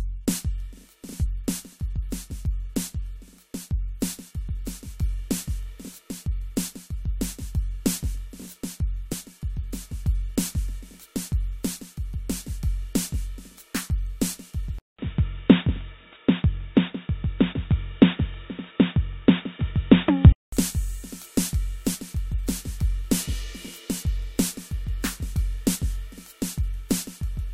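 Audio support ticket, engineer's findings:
Damaged data in compressed stream: short glitches at 1.24–1.27, 9.11–9.13, 17.52–17.54, 21.93 and 25.74–25.76 s. Decoder loses frame sync. Waveform shows brief glitches; spectrogram shows thin broadband streaks.

Input switched to a poorer device, likely cause: music turns dull and boxy from 14.79 to 20.52 s, with a 200 ms dropout at the switch. Spectrogram is empty above 3.8 kHz. Waveform shows a level step of around 5 dB and a faint new noise floor.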